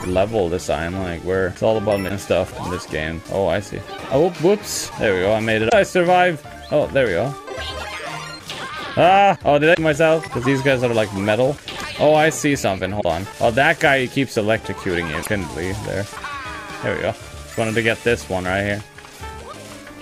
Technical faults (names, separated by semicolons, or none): damaged data in a compressed stream